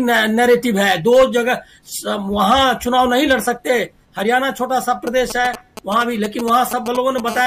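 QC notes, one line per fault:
5.07–7.20 s, GSM signalling bursts: a galloping dit-dit-dit of brief raspy buzzes sits around 10 dB below the sound. A nearby 2G phone is sending short groups of radio bursts while signalling, and the audio circuitry rectifies each group into clicks repeating at 216.7 Hz.
7.28–7.42 s, GSM phone buzz: a hard, harmonic-rich buzz at 216.7 Hz, about 12 dB below the sound, runs steadily for 0.14 s and bears no relation to the audio. The phone is now in a continuous call, and its regular transmit bursts are rectified into a constant tone.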